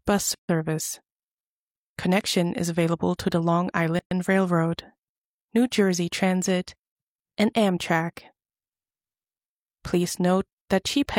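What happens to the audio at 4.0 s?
The sound drops out abruptly at 3.99 s and returns at 4.11 s, leaving a hole of about 121 ms with softened edges before it carries on exactly where it broke off. This is a gap at a join of encoded pieces: the audio was encoded in separate sections and spliced without trimming, so the encoder's start-up delay and the padding in the previous section's final frame both remain as silence.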